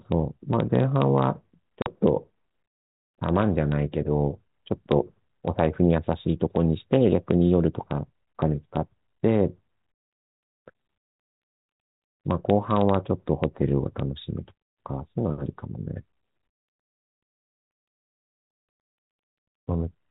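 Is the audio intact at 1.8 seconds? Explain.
No. At 1.82 s there is packet loss on an ADPCM call, running to 1.89 s: about 40 ms of audio drops out to silence, which points to roughly two lost packets. The gap has hard edges, and because the decoder's adaptive predictor and step size lose track of the sender's while data is missing, the speech resumes briefly and slightly distorted before re-synchronising. The 32 kbit/s G.726 coding around it shows only light damage.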